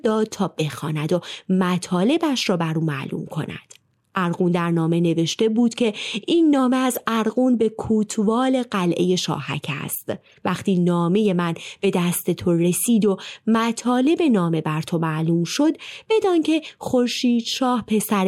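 Corrupt frame decoded at 6.93 to 6.99 s and again at 10.23 to 10.34 s: bit errors damaged compressed frames of this speech, and the decoder played them anyway, misplacing energy across the spectrum. The first spans a few frames, about 60 ms, peaking near -15 dBFS as a loud chirpy blip. The second covers roughly five frames, about 110 ms, and is far quieter, around -35 dBFS, a faint squeak of noise.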